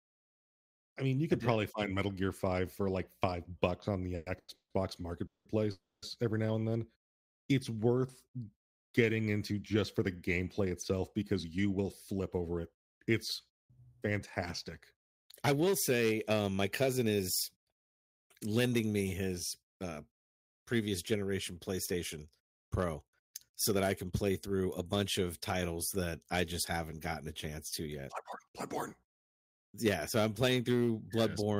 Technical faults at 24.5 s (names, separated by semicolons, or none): jitter buffer speed-up